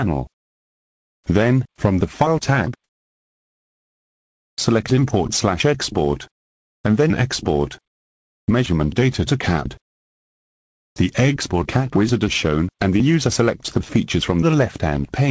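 At 4.56 to 4.58 s the sound jumps in abruptly, its soft start shaved off by about 20 ms of comfort noise. That's likely an onset clipped by the voice detector, slow to catch the restart, on a G.722 call path that tops out at 8 kHz.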